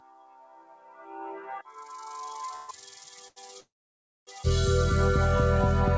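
Throughout the clip, a noise suppressor applied to music or sounds is working against the material. A processor built to clean up speech treats steady tones, ambience and decaying tails as noise and pulls them down, while sharp onsets slip through. The gain swings by about 20 dB, so the sound pumps and thins rather than carrying the steady dulling of a band limit. The call path's own ceiling is separate: nothing above 8 kHz, which fits a G.722 wideband codec.

From 0.00 to 2.12 s, the sound is cut by the noise suppressor, dropping by as much as about 16 dB across roughly two seconds. Sustained parts sag and their decays are clipped short as the suppressor decides they are noise. Unlike a dropout, the sound never vanishes. It sinks and recovers with the material, and transients stay comparatively intact.

At 2.56 to 2.70 s comes a call audio freeze. The last sound is stretched for about 122 ms as a fading buzz that never reaches silence, then the audio resumes exactly where it left off, so the timeline is pushed back with nothing lost. 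A later one, 3.60 to 4.29 s, runs for about 666 ms. Most of that, around 590 ms, is silence after a brief decaying tail. The likely cause is packets held up in transit, leaving the jitter buffer empty.

The short stall from a late packet at 3.28 to 3.38 s differs mainly in scale. Only about 81 ms is filled, so one sound simply hangs a beat too long with a slight buzzy dip before continuing, with no fade-out and no silence. Here a single packet arrived late and the receiver held the previous sound until it turned up.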